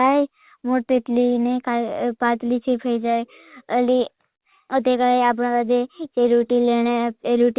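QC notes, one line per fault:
No faults are audible in this speech clip. The audio has passed through a call path that behaves as expected, with nothing above 4 kHz, which fits a narrowband telephone codec such as G.711 mu-law.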